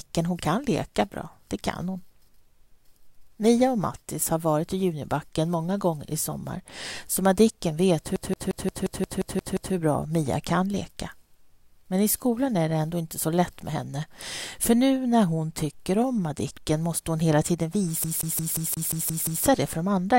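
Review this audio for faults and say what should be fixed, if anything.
There are two spots where the CD gets stuck on one turn, from 8.16 to 9.74 s and again from 18.04 to 19.45 s. A scratch keeps kicking the laser back a track, so the same 0.18 s slice replays with a tiny mute at each jump, nine times the first round and eight the second, giving that quick, even stutter. Re-rip from a clean disc, or use a secure-ripping tool that re-reads and verifies problem sectors.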